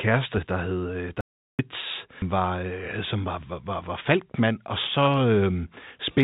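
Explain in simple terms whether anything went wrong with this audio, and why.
Three things go wrong in this speech clip.

From 1.21 to 1.59 s the sound cuts to dead silence for about 0.38 s, with no background hiss at all. This is an audio dropout to silence, likely caused by the input briefly disconnecting or muting while recording carried on writing nothing.

At about 2.22 s the speech jumps forward abruptly, with no pause at the join. This is a skip ahead: roughly 0.7 s of audio was thrown away, lost on the way or because too much had piled up waiting to play, and the two ends were stitched straight together.

Right after, from 2.36 to 2.71 s, the speech sounds rushed, running 16% fast, then slightly hurried again from 3.15 to 4.41 s at 5% fast, with no change in pitch. This is jitter buffer speed-up. The receiver trimmed tiny slices, roughly 70 ms in total each time, to shrink a backlog of delayed audio.

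The phone-call sound, with nothing above 4 kHz, comes from the call's codec.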